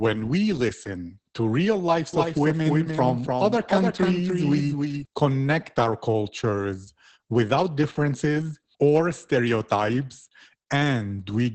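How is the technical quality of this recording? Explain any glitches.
The quality is poor. Heavy compression runs through the whole clip, and a doubled copy of the audio appears for a few seconds early on.

Opus voice compression, throughout. The speech is coded with the SILK linear-prediction mode. Nothing survives above 8.5 kHz. The excitation is coded coarsely, which fits a bitrate around 10 kbps. The speech sounds muffled, hoarse and slightly robotic.

Doubled audio track, from 2.13 s to 5.05 s. A second full-band copy of the speech trails the original by about a third of a second. It is a few decibels quieter. It has no decay or room colour, and it starts and stops abruptly. The likely cause is a second capture through a slower path.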